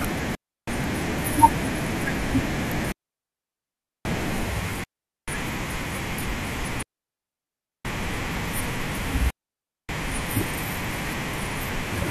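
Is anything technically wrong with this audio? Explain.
Yes. Digital wireless dropouts occur at 0.35–0.68, 2.92–4.05, 4.84–5.28, 6.83–7.85 and 9.30–9.89 s: the receiver loses too much data and mutes, leaving clean near-silent gaps of 0.33 to 1.13 s with no noise bursts.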